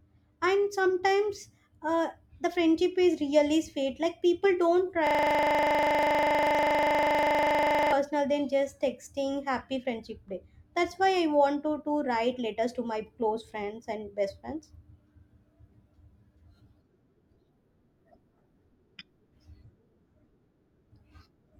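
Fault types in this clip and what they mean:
System hang loop: From 5.07 to 7.92 s the speech stops and a single 40 ms slice of audio repeats exactly, 71 times, as the sound hardware keeps replaying the same buffer while the system is frozen. At a 25 Hz loop rate it sounds like a steady, rough buzz. Mains hum sits underneath ongoing sound, but this buzz replaces the speech entirely and starts and stops abruptly.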